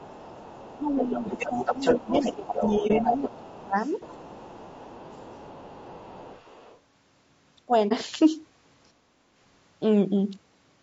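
Throughout the clip, the speech was likely carried by low-delay AAC compression, the AAC-ELD coder used in video calls, at a rate that fits around 32 kbps. At that low rate too few bits are left to code the spectrum, so the damage is plainly audible. The voice sounds rough and grainy, with noise filling the gaps between harmonics and a thin, synthetic-sounding top band.

From 0.0 to 6.79 s, the other side's voice is leaking through. This is likely because the talker's device played the far end on a loudspeaker and its echo canceller failed to remove all of it from the microphone. That second voice sits roughly 10 dB below the main speech, a second layer running under it.

Speech suppressed in double talk likely follows from the same situation. With both sides talking at once, the canceller could not tell its own talker from the loudspeaker echo and turned everything down. Between 0.78 and 3.78 s, the main voice dips for around two seconds in total, by up to roughly 20 dB. 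Shorter dips follow at 5.24 to 5.55 s, by up to roughly 15 dB, and at 7.65 to 7.72 s, a brief cut of roughly 25 dB.

AAC frame loss with muting occurs at 2.87 to 2.91 s and again at 7.88 to 7.93 s. Each time, about 30 ms of audio went missing, which fits a single lost frame. The decoder zeroed that frame's spectrum, and the overlapping windows fade the sound out and back in, leaving a brief dip.

At 8.94 to 9.27 s comes background gated by the echo canceller. While the loudspeaker was active, the canceller clamped the microphone hard, and the room sound drops by about 13 dB for roughly 0.3 s before returning when the gate releases.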